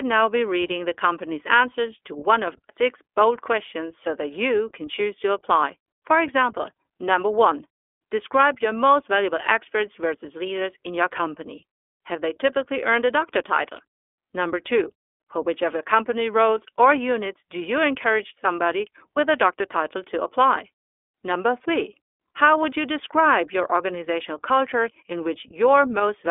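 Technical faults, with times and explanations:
Throughout, iLBC codec: nothing above 3.7 kHz, speech rough and synthetic from independently coded 20 ms frames, which fits iLBC's 15.2 kbps mode.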